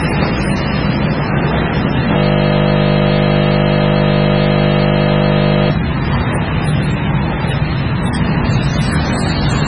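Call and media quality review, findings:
MP3 compression, likely cause: watery, swirly texture throughout, nothing above 10.5 kHz. Spectrogram shows a hard treble ceiling and flickering spectral holes, which fits a very low bitrate of around 16 kbps.

System hang loop, 2.18–5.70 s: a steady 50 Hz buzz as one 20 ms slice of audio repeats exactly. The waveform shows identical repeating cycles, and the spectrogram shows harmonics spaced 50 Hz apart.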